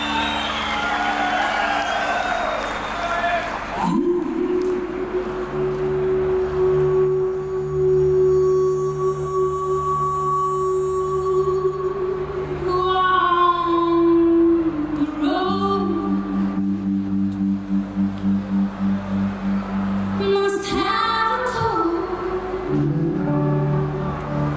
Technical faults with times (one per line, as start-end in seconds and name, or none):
none